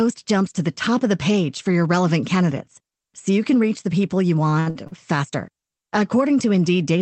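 From 4.49 to 4.93 s, packets arrive late or more slowly than they play out, so the jitter buffer runs dry four times in under half a second. Each time, the receiver stretches the last sound to cover the wait, for about 180 ms in total, roughly two-fifths of that stretch, with the longest hold around 62 ms. Nothing is lost, but the audio there drags and stutters in short, repeated stalls, all heard through the call codec's band limit near 8 kHz.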